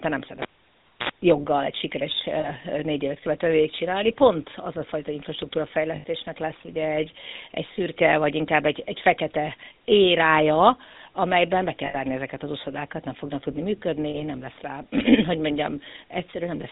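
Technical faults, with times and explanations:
Throughout: GSM full-rate codec. The speech has that buzzy, gravelly grain you get when the vocal tract is modelled and then driven by regularly spaced pulses, with only every third excitation sample kept. Nothing above 4 kHz survives, so it sounds narrow and phone-like. The damage is plainly audible and fits the 13 kbps full-rate codec. The room noise sits about 52 dB below the speech and is barely a factor.
2.4 to 2.5 s, 5.96 to 6.04 s, 11.86 to 11.97 s and 14.1 to 14.2 s: lost GSM frames. At each of these spots the decoder lost frames and reused the settings of the last good one, so you hear a brief rough, metallic ring where the speech should be. The first and last gaps run about 40 ms, which fits two 20 ms frames. The middle two run about 80 ms and ring longer, without ever fading fully to silence.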